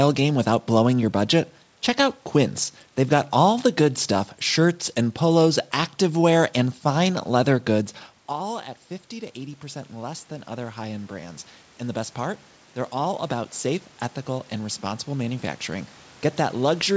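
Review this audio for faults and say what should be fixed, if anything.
From 7.07 to 15.96 s, voice and room noise slowly swell together by about 13 dB. This is automatic gain rising after the input dropped about 16 dB. To prevent it, keep the talker at a steady distance from the microphone, or limit how far and how fast the gain control can raise its level.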